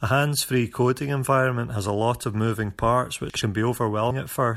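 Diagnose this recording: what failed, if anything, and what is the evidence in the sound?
Chunks out of order at 3.30–3.42 s, a buffer-stage fault: one 60 ms chunk plays a chunk late, so the speech jumbles briefly across three hard joins.

Damaged data in a compressed stream at 4.09 s, a codec-stage fault: corrupted frames make the decoder lose sync, producing a short glitch in the speech.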